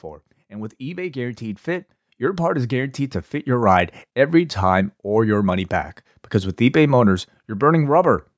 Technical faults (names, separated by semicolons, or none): automatic gain rising